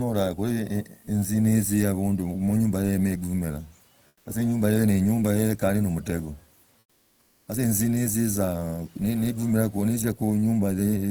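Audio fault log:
4.07–4.25 s and 6.79–7.47 s, comfort noise in place of the background: during these two pauses (180 ms and 680 ms) the natural room noise gives way to a flat, featureless hiss, about 6 dB and about 9 dB quieter. The likely cause is Opus discontinuous transmission, which halts the stream in silence and has the receiver synthesise a rough stand-in. On a spectrogram the textured background turns into a smooth, uniform wash, and on the waveform the noise floor steps down, then jumps back when sound resumes.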